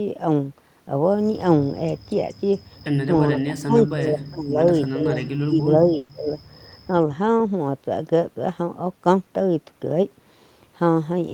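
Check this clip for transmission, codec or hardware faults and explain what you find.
Two faults are audible, both of the kind a network call produces.

From 3.31 to 4.6 s and again from 4.95 to 6.39 s, the echo canceller likely mistook simultaneous talk from both ends for echo, causing speech suppressed in double talk. The speech dips by up to about 25 dB, for roughly a second in each stretch.

Inside the second stretch, a burst of packet loss at 5.97 to 6.11 s removed 120 ms of audio. The receiver filled the gap by extending and fading the last sound, so a held buzz or hiss replaces that stretch before playback resumes further on.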